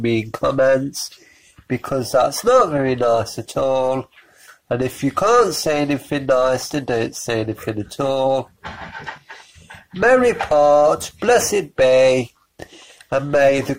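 At 5.71 s a bit error spike produces one sharp tick. A single flipped bit throws one sample off by a power of two, to about -20 dBFS, before it returns. Unlike a dropout or buffer click, no audio goes missing or repeats.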